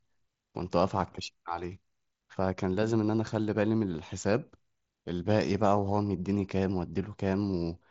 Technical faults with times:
none

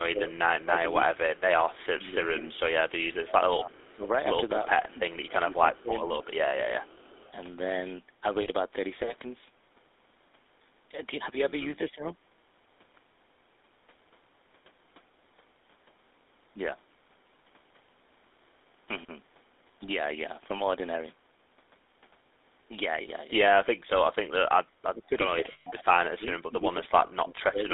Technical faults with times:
0.00-27.73 GSM full-rate codec
1.16-7.32 echo leak
3.54-6.10 speech suppressed in double talk
8.42-8.48 lost GSM frames
11.91-12.03 speech suppressed in double talk
23.02-23.08 lost GSM frames
24.31-27.67 speech suppressed in double talk
25.52-25.67 lost GSM frames

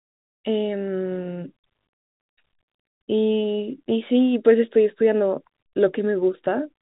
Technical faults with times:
none

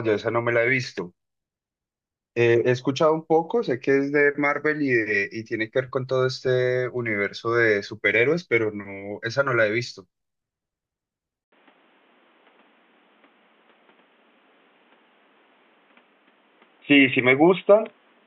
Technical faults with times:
11.44-18.27 input switched to a poorer device

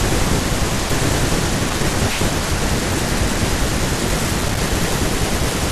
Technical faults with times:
1.70-1.94 loose connector crackle
4.41-4.57 loose connector crackle

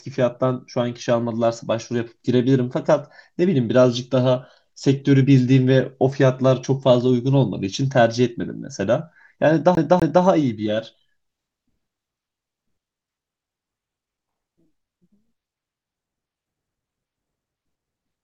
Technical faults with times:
9.75-10.24 CD stuck on one turn

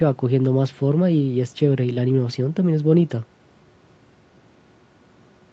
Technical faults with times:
none

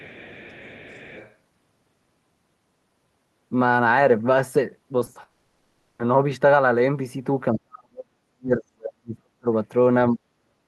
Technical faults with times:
0.00-1.35 other side's voice leaking through
4.99-5.17 short concealed packet loss
5.23-6.01 long network dropout
7.53-9.51 speech suppressed in double talk
10.11-10.24 speech suppressed in double talk

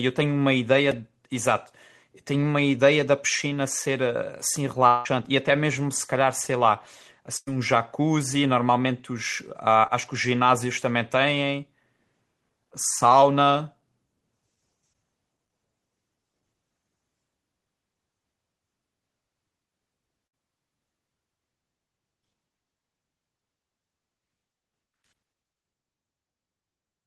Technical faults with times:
0.91 repeated buffer
4.87-5.07 long network dropout
6.44 repeated buffer
7.37-7.49 burst of packet loss
9.87-9.91 short concealed packet loss
20.27-20.35 burst of packet loss

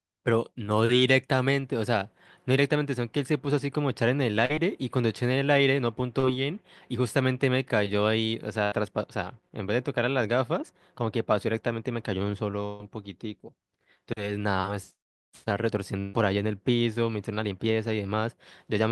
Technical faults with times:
4.45-4.51 short concealed packet loss
6.19-6.25 short concealed packet loss
8.63-8.74 burst of packet loss
12.66-12.81 burst of packet loss
15.99-16.15 burst of packet loss

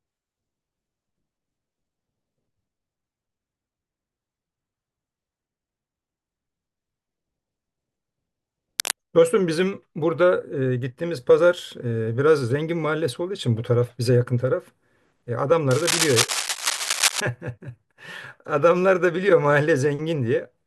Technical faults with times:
8.79-8.96 cable scratch noise
15.71-17.20 cable scratch noise

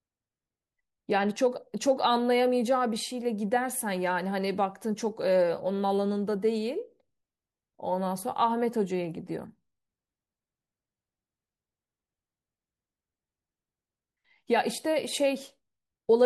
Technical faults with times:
none

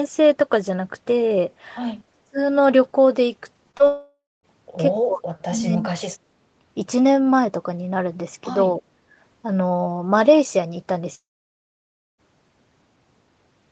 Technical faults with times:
2.12-2.39 speech suppressed in double talk
3.71-3.81 short concealed packet loss
3.87-4.45 long network dropout
5.03-6.16 speech suppressed in double talk
8.77-8.82 speech suppressed in double talk
9.10-9.17 background gated by the echo canceller
11.15-12.20 long network dropout

